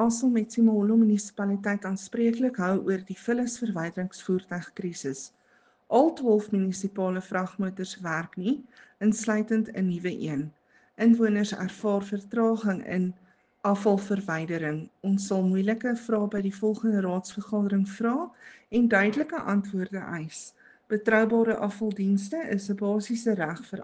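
No technical faults can be heard anywhere in this recording.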